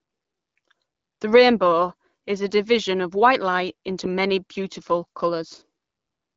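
No technical faults can be heard in this speech, which comes through an AMR wideband (HD Voice) codec at 12.65 kbit/s.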